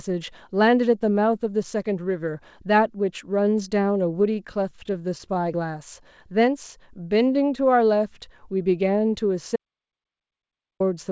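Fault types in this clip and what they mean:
Repeated stalls (stutter): Between 4.16 and 5.44 s the speech hitches sixteen times in quick succession. Each hitch is a short stretch where the receiver ran out of incoming audio and held the previous sound going rather than leave a hole. None of the pauses exceeds 12 ms, and together they add about 152 ms, roughly an eighth of that span. No speech goes missing, but the delivery drags and judders, showing a jitter buffer repeatedly draining as packets arrived late or too slowly.
Audio dropout to silence: From 9.56 to 10.80 s the speech cuts off abruptly into silence, then resumes mid-flow after about 1.25 s. The gap holds no room tone and none of the band-limited, 8 kHz-capped character of the G.722 call path around it, only silence. That points to the input feed being lost while the recording or encoding carried on writing samples, likely from a momentary disconnect or mute. 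Whatever was spoken during the gap is gone.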